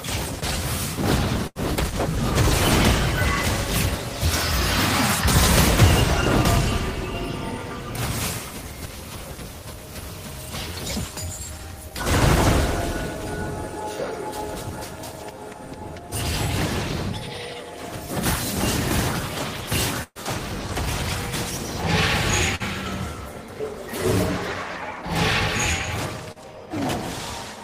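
Packet loss affects this audio in two ways. A burst of packet loss at 1.47 to 1.58 s and again at 20.03 to 20.18 s leaves gaps of about 80 ms and 120 ms that the receiver fills by extending and fading the last sound, and the second gap ends in about 50 ms of silence. Playback then resumes further on with the intervening audio missing. Short concealed packet loss appears at 22.55 to 22.63 s and 26.32 to 26.39 s, where roughly 40 ms each time was extrapolated and blended back, heard as a brief smear or wobble.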